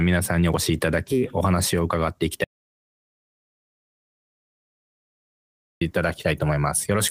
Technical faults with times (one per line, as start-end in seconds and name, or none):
2.44-5.81 audio dropout to silence